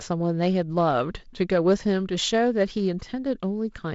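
No faults are audible in the speech, which runs over what sounds like G.722 wideband telephone coding with nothing above about 7.7 kHz and a slightly noisier lower band consistent with the 48 kbit/s mode.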